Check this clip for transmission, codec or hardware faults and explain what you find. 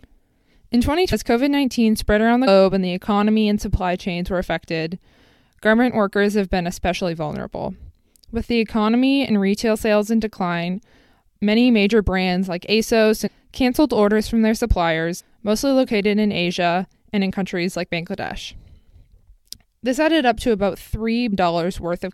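The speech has five places where compressed frames are skipped, at 1.12 s, 2.46 s, 13.26–13.28 s, 15.19–15.21 s and 21.32 s. Each time, a stretch of audio goes missing: roughly half a second, 0.2 s, 0.7 s, 0.2 s and 0.4 s respectively. The skipped amounts point to whole frames of about 23.2 ms each being lost or rejected by the decoder. On a waveform, the envelope jumps abruptly. On a spectrogram, harmonics break with no gap.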